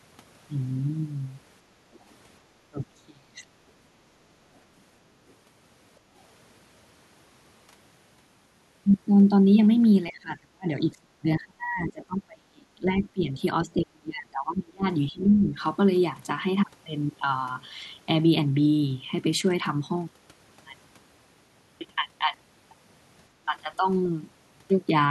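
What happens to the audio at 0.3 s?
Nothing goes wrong at 0.3 s; the speech there is intact, with no dropout, click, distortion or other fault.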